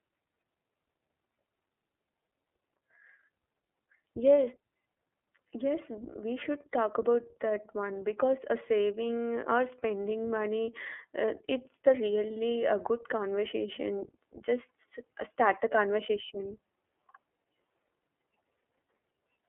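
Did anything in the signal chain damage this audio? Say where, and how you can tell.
Yes. The damage comes from the codec stage, and it runs through the whole clip. This is iLBC coding. The speech is confined to a narrow telephone band, from 300 Hz up to 3.4 kHz. Nothing above that survives. The voice sounds plainly rough and synthetic. Each short frame's excitation is coded on its own, with no help from the frame before. The coarseness fits 30 ms frames at about 13.33 kbps.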